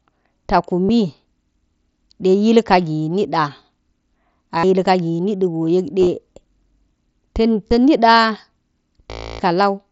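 Brief buzzy held-tone patches in this speech clip near 0.86, 4.58 and 7.68 s, a nearly hidden scatter of short dropouts near 6.01 s, and a longer buzzy patch from 9.11 to 9.40 s, come from concealed Bluetooth headset packet loss.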